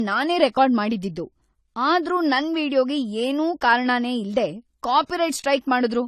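Speech, with a hard ceiling throughout: nothing sounds above 14.1 kHz. The low-bitrate artefacts remain despite a high-bitrate MP3 container. This is likely low-bitrate audio saved at a high bitrate, which fits an early encode around 32 kbit/s whose losses the re-encode cannot restore.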